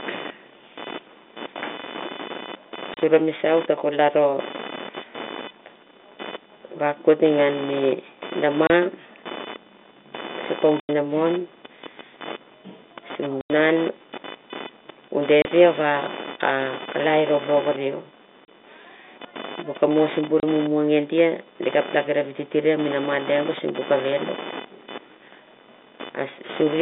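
A buzz runs under the whole recording, pulsing at roughly 500 Hz and sitting around 15 dB below the speech. This is computer activity noise: processor, graphics or mouse load shifting the shared ground of the audio circuit, so the buzz follows the machine rather than the talker.

Against the narrow telephone band of the G.711 line, the speech drops out abruptly at 2.94, 8.67, 10.8, 13.41, 15.42, 18.46 and 20.4 s. These holes are packet loss filled with silence. Most gaps last 30 ms, and those at 10.8 and 13.41 s last 90 ms, which points to 30 ms packets lost singly or three in a row.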